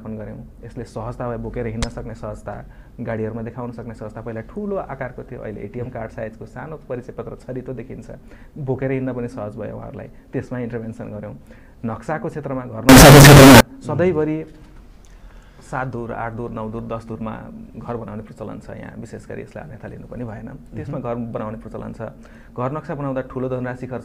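From 12.89 to 13.61 s the audio turns into a blast of harsh, near-square noise at an almost fixed, high level, with the background as loud as everything else. That's float read as integer: the samples were likely stored as 32-bit float and read back as 32-bit integers.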